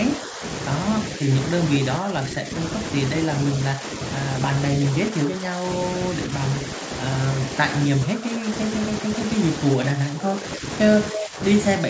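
An echo canceller likely mistook overlapping talk for loudspeaker echo and turned the speech down. This is speech suppressed in double talk, heard as dips of roughly 10 dB at 0.17–0.43, 1.99–2.52, 3.73–3.85, 5.1–6.31, 7.88–8.48 and 9.38 s to the end, with a smaller dip at 1.16–1.3 s. At 11.13–11.21 s, a loudspeaker's echo likely slipped past cancellation. This echo leak returns a 264 ms delayed copy of the sound, only about 5 dB below the speech.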